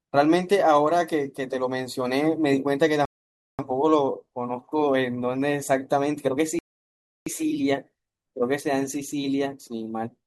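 At 3.05 s the speech drops into dead silence for about 0.54 s, then picks up exactly where it left off; at 6.59 s it happens again for about 0.68 s. Both are rebuffering stalls: the player ran dry and waited for more data, so nothing's lost, just time added.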